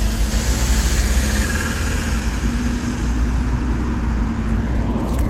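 From 1.74 s to the end, a jitter buffer speed-up sets in. The receiver's buffer had grown too deep. It trimmed tiny pitch-period slices again and again, removing about a fifth of a second. The sound runs 6% fast, hurried but unchanged in pitch.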